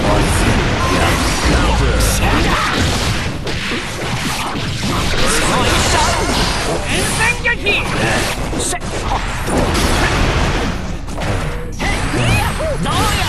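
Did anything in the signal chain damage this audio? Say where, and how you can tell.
No, nothing in the signal chain audibly damaged this audio. Listening through the whole recording, nothing points to a problem at any stage, from capture and conversion through to storage and playback.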